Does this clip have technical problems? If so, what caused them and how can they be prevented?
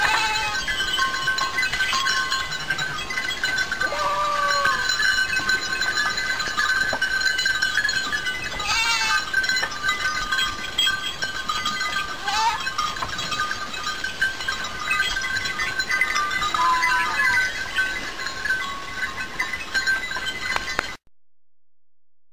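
No, there are no technical faults to report and nothing here calls for preventive measures.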